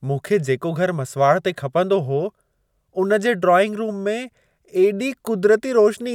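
No technical faults can be heard anywhere in the recording. At no point does anything in the audio chain audibly go wrong.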